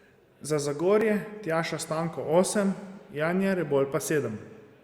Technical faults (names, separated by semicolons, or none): overlap between stream segments